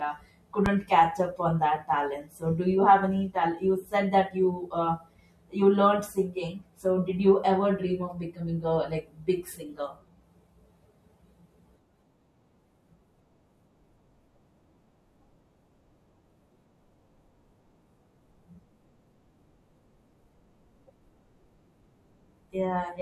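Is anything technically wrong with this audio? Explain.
Yes. A loud pop hits from 0.66 to 0.70 s, just before "catch up on that": one sharp thump standing well above the speech, which carries on underneath. It is likely a sudden voltage pulse, from a plug, switch, static or driver glitch, added into the signal.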